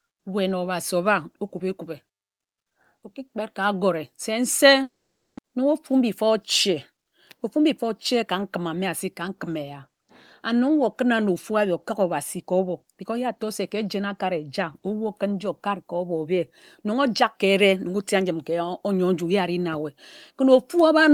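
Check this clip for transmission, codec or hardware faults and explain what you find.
One transmission fault is audible, a long network dropout in the speech. It runs from 4.82 to 5.39 s. The sound does not simply stop. The last audio trails on as a fading buzz or hiss, then gives way to silence for about half a second. This is likely a stretch of lost packets, with the receiver concealing the gap before giving up. About 500 ms of speech never returns. When the voice resumes, the timing shifts slightly.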